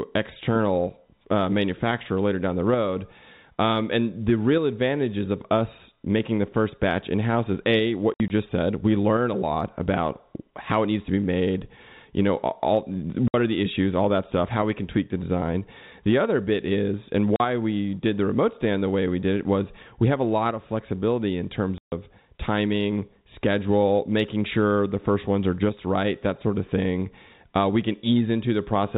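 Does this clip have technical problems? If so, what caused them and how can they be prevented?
Yes. Packet loss filled with silence: lost packets were replaced with silence, cutting hard-edged gaps after "house is a what" at 8.14–8.3 s, after "made you know all" at 13.28–13.34 s, at 17.36–17.4 s and after "of flexibility in terms" at 21.78–21.92 s. The lost audio totals 40 to 140 ms per event, consistent with 20 ms packets. Using packet loss concealment, a jitter buffer and forward error correction would prevent it.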